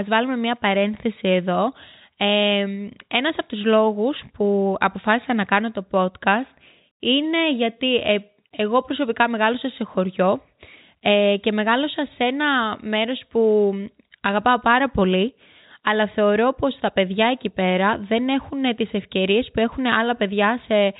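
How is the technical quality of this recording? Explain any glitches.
No glitches can be heard anywhere in the speech. The sound carries the narrow band of G.711 telephone coding, with nothing above about 3.8 kHz.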